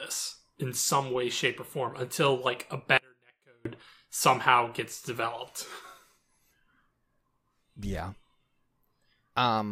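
At 2.98 s, after "form until like a", the speech cuts out abruptly for 0.68 s, leaving a faint trace far below normal level, then returns on "somehow gets developed". This audio dropout to a faint residue likely reflects signal lost upstream while the following path stayed live.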